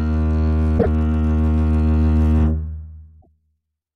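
A music clip with two bursts of damaged data in a compressed stream. They fall at 0.75 to 0.87 s and 3.18 to 3.28 s. Each is a brief chirp, squawk, click or short hole. Corrupted bytes make the decoder misread frames and lose sync until it finds the next valid header.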